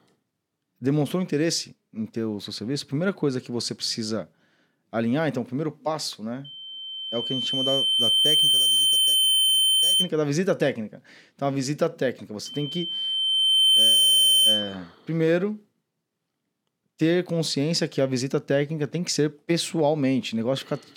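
A microphone is picking up its own loudspeaker, and at 3.1 kHz the loop gain passes one, causing loudspeaker feedback squeal from 6.44 to 10.09 s and again from 12.45 to 14.77 s. Each time a pure tone swells over roughly two seconds, then faster, to about 5 dB and later about 10 dB above the speech.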